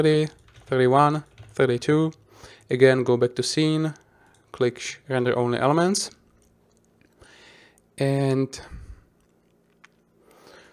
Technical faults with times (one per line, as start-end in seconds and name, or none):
none